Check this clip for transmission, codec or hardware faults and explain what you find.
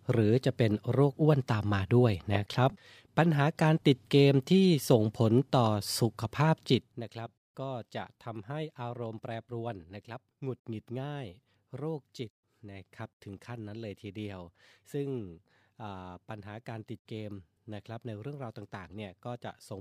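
One fault is present: zipper noise in the speech between 6.68 and 7.04 s. Over that span the level drops by roughly 15 dB, but the gain is applied in discrete jumps, at around a hundred steps per second, rather than as a continuous ramp. Each jump puts a small discontinuity into the waveform, so the fade carries a fine ticking, zipping texture that lasts only while the level is moving.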